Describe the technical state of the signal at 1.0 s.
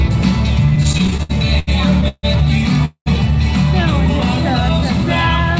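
At 1.0 s, packets were reaching the receiver late and its jitter buffer kept running dry, causing repeated stalls (stutter) from 0.70 to 2.25 s. The receiver stretched the last sound across 13 gaps of up to 149 ms, so nothing is lost, but the audio drags and stutters.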